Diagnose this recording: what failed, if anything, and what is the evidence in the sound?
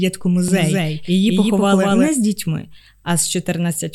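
Doubled audio track, 0.48 to 2.08 s, before "з дітьми". An equally loud dry copy lags about 200 ms. Likely a second capture path.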